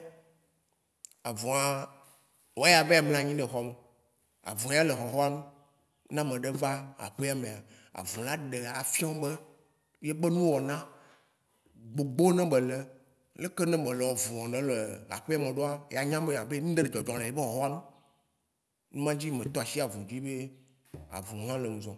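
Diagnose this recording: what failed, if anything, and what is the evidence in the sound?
The sample-rate converter, taking 48 kHz down to 24 kHz, restarted its filter on every block: resampler restarted on every block. Each 10 ms block edge carries a small error, heard throughout the speech as a 100 Hz buzz that sounds only under signal, which fits 480-sample blocks.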